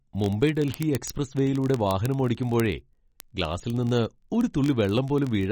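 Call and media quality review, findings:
Watery, swirly band-limited speech throughout, nothing above 8.3 kHz, smeared consonant attacks, clearly audible damage. Likely MP3 encoding at a starved bitrate, consistent with about 32 kbps; flickering weak bands separate it from a plain low-pass filter.

Word clock ticks from 0.12 s to end: sharp single-sample clicks of uneven strength, roughly every 20 ms, hundreds in total. Unlocked digital input slipping against a sender clock off by around a tenth of a percent. Steady metronomic rate separates it from random dropouts or crackle.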